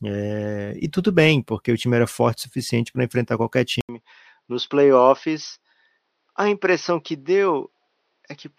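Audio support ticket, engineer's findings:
Input switched to a poorer device, 3.81 s to end (8.58 s), just after "suficiente para enfrentar qualquer". Symptom: 80 ms dropout, then duller, boxier sound; nothing above 6.2 kHz; level down about 5 dB; faint new noise floor. Likely cause: capture moved to a narrower-band microphone or headset call profile mid-recording.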